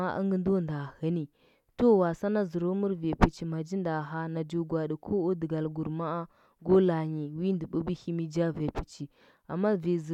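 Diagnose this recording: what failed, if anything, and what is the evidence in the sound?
Nothing in this speech recording points to a failure at any stage of the chain, and the signal stays continuous and steady throughout.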